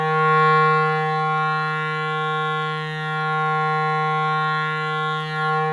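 The music signal shows no technical faults at any point.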